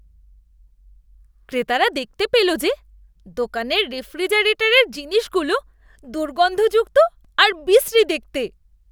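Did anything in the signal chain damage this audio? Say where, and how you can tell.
Yes. At about 7.25 s the speech is broken by a brief tick or dip, too brief to hear as a gap, because a block of digital silence only about 2.2 ms long drops in. The fault likely sits in the driver or buffer stage. The output buffer was likely not filled in time, so a short run of samples went out as zeros. The waveform jumps to silence and back with no fade.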